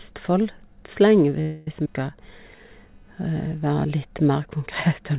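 A faint, gritty buzz runs under the whole recording. It pulses at around 300 Hz and sits far below the speech, roughly 45 dB down. It rises and falls on its own schedule rather than following the talker. This is computer activity noise: changing load in the processor, graphics hardware or mouse shifts the ground that the audio circuitry shares, and those current swings leak into the signal as a chirpy, scratching hum.

From 1.41 to 1.68 s the sound locks onto whatever it was producing and stretches it into a fading buzzy tail for about a quarter of a second. Then the speech resumes where it left off, with nothing lost, only pushed later by 258 ms. That pattern marks a call audio freeze, most likely because packets stalled in transit and the jitter buffer ran dry. The receiver extended the last sound until fresh data arrived.

At 1.85 s there is an abrupt lurch forward, a near-seamless splice where roughly a tenth of a second of speech simply vanishes. 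This is a skip ahead. A chunk of audio was discarded, either lost on the way or dropped when the jitter buffer overflowed, while later material was already queued. The two sides of the cut were butted together with only a few milliseconds of filler, so the jump is heard as a clipped, hurried transition rather than a gap.

Between 2.18 and 3.16 s the speech drags noticeably, running at about 92 percent of normal speed. The pitch holds steady, but sounds are drawn out and carry a slight wobble. This is a jitter buffer slow-down. With its reserve running low, the receiver repeated individual pitch cycles and slivers of pause over and over, padding in 79 ms in total to rebuild its cushion. Throughout, nothing is heard above 4 kHz, which fits a narrowband G.711-style call codec.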